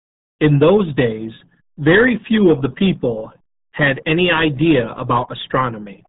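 The speech has been squeezed through the RealAudio 14.4 codec for its whole length. That old dial-up speech coder keeps only a crude model of the signal, and the heavy damage here suits a stream of about 8 kbit/s. Nothing survives above 3.8 kHz, so the voice is muffled and boxy, while the coarse coding of what remains gives it a gargly, watery texture throughout.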